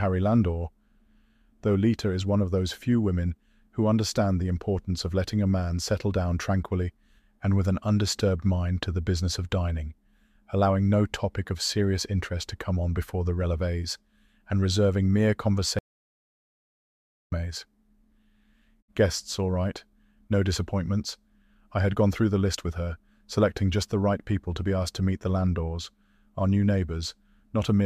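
A speech recording with an audio dropout to silence, likely from a lost input: after "releves and reserving mere" the sound cuts to silence from 15.79 to 17.32 s, losing about 1.5 s.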